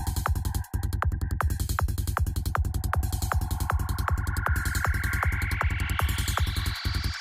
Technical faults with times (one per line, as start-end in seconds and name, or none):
none